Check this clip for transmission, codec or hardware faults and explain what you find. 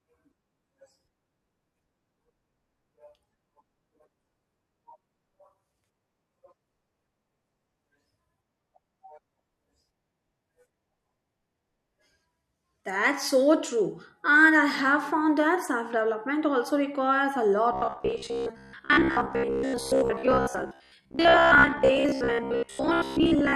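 One fault is present: robotic sound from repeated short buffers, running from 17.73 s, just after "development also requires a", to the end of the clip. Fresh audio was likely arriving too seldom, so the software replayed a roughly 15 ms chunk in place of most of the missing signal. The repetition imposes a fixed 66.8 Hz buzz, turning the speech into a rigid, metallic drone that only loosely follows the words.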